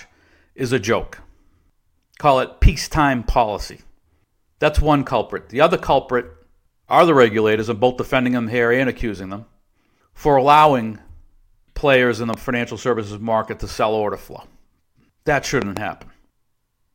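Speech with loud pops: a single thump at 12.34 to 12.36 s, between "players in the" and "financial services market to", and a double pop at 15.62 to 15.79 s, both around ten decibels above the voice. Unlike a dropout, speech continues underneath, pointing to a likely voltage pulse from a switch or static.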